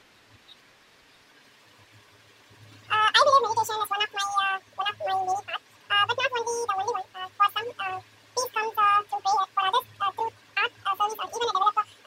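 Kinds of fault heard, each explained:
Wrong sample rate: the speech plays at exactly twice its proper speed and an octave high, with speed and pitch locked together throughout, which fits audio captured at 24 kHz being played back at 48 kHz without any rate conversion.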